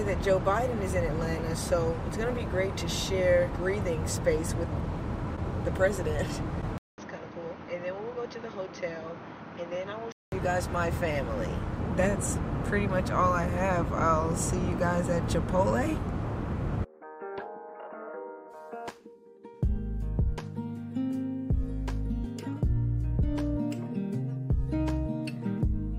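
At 6.78 s the sound drops out for about 200 ms, then returns duller and boxier, roughly 10 dB quieter, with a new background noise sitting about 40 dB beneath it. This is likely an input switched to a poorer device, one with a narrower passband and its own noise. On a spectrogram, energy stops sharply at 6.4 kHz, with a gap at the switch; the waveform shows a brief flat line and smaller amplitude. Full bandwidth and level return at 10.32 s.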